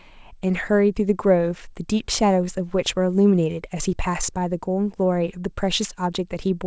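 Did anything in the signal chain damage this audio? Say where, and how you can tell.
No, nothing damaged this audio.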